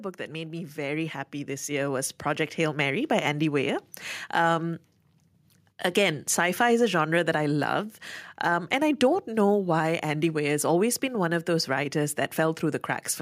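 Speech with automatic gain rising from 0.27 to 2.9 s: the control judged the input too quiet and lifted its gain by about 10 dB. Unlike a talker moving closer, the background noise swells along with the voice, at the same gradual rate.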